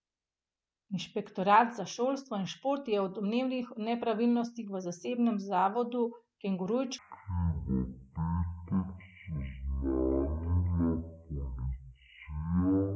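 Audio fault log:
6.99–12.96 s, wrong sample rate: Playback is being clocked far slower than the material was captured, with no conversion, which fits audio recorded at 44.1 kHz being played at 16 kHz. The speech runs at 0.363 times speed and drops about 17.6 semitones, sounding slow and deep.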